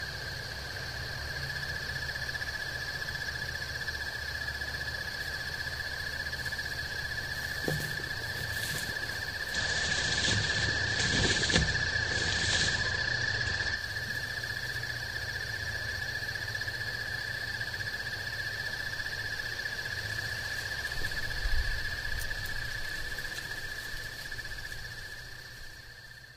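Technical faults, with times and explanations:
9.46–13.85 s: digital radio blending to analogue. Digital reception failed, and a 129 ms cross-fade to FM brought in hiss roughly 30 dB down and a level shift of about 4 dB.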